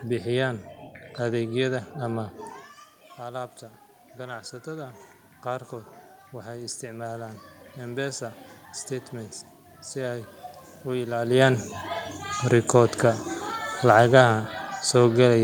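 Around 2.5 s the talker drops back from the mic, about 13 dB quieter, and from 3.17 s to 11.2 s you get automatic gain rising as the AGC slowly lifts its gain by about 9 dB to compensate. The giveaway is that the room noise swells right along with the voice, a gradual climb rather than a jump. The talker moving again near 11 s is just natural movement, not part of the fault.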